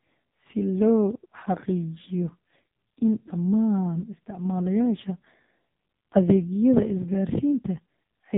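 All the way through, the speech has that AMR narrowband mobile codec sound: nothing above 3.8 kHz, heavily buzzy and synthetic, which fits a very low bitrate mode around 5.15 kbps.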